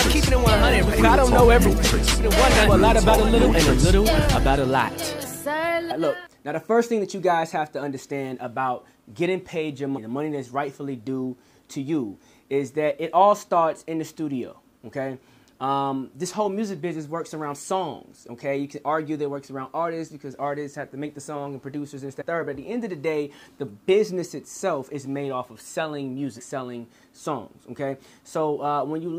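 Damaged data in a compressed stream shows up four times, at 5.90 to 5.92 s, 9.96 to 9.99 s, 22.20 to 22.22 s and 26.38 to 26.40 s. Each lasts about 20 ms. At these points part of the encoded data was corrupted or lost. The decoder could not read those frames correctly. It lost sync and searched for the next valid frame header. Each event is a brief disruption that breaks the flow of the sound.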